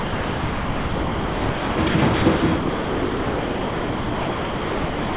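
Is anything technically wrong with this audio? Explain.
Yes. From 0 to 1.78 s, at 1.88, 2.16 and 2.36 s (each lasting 60 ms), and from 2.56 s to the end, the sound gives way to steady comfort noise. This is likely sound dropped by the voice detector, which treated the audio as background and stopped sending. The band-limited call audio, with nothing above 4 kHz, frames these gaps.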